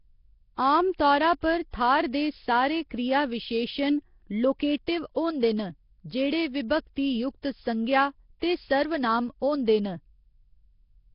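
Right from the start the whole speech clip has a rough, hissy halo and a watery, underwater smear, with nothing above 5.3 kHz. That's heavy damage of the sort Nellymoser compression leaves, likely the old Flash codec running at a low bitrate around 22 kbps, starving weak bands and filling them with noise.

At 4.87 s there's a pre-echo: a brief hiss of about 14 ms creeps in just ahead of a sharp attack. The codec smeared the noise meant for the loud onset back into the quiet moment before it, so the attack lands soft and blurred.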